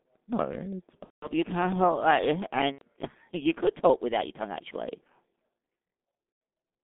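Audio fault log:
throughout G.723.1 codec: a low-rate telephony coder, consistent with roughly 6 kbit/s in 30 ms frames, confines the sound to about 200 Hz to 3.5 kHz and tracks the voice slowly, so the speech is heavily muffled and hoarse, with smeared consonants.
1.04–1.27 s, 2.72–2.82 s, 6.32–6.41 s VoIP packet loss concealed by the speech codec: packets went missing for about 180 ms in the first gap and about 90 ms in the others. The decoder rebuilt them from its last pitch and filter, so the speech stretches into a buzzy tone or coloured noise that fades, and stays weak briefly afterwards.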